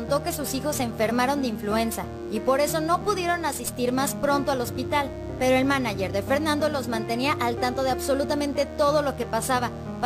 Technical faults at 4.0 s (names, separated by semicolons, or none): DECT cordless phone buzz